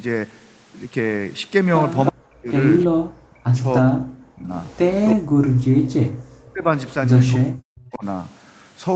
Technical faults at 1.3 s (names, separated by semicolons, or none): none